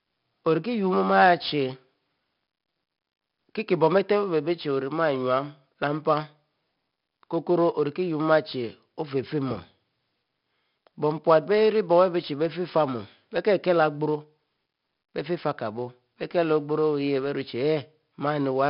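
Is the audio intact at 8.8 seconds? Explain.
No. At 8.8 seconds, as across the whole clip, the speech has passed through 4-bit ADPCM compression. Each sample is coded as a small step from a predicted value, and the step size has to adapt as the signal changes. Here the damage is heavy, consistent with roughly 44 kbps. The coding error rides on the speech as a gritty hiss that rises with loudness, sharp onsets smear where the step can't keep up, and nothing is left above 5.3 kHz, so the sound is dull.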